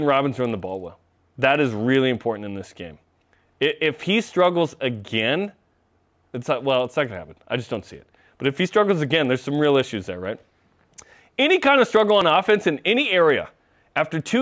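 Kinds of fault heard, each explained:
Resampler restarted on every block: the sample-rate conversion, which points to 24 kHz down to 16 kHz, was run afresh on each 50 ms block, so every block edge was filtered without its true neighbouring samples and carries a small error. The result is a steady 20 Hz ticking buzz riding under the speech throughout, heard only while sound is present. A spectrogram shows thin vertical lines every 50 ms, and the waveform shows small discontinuities at each block boundary.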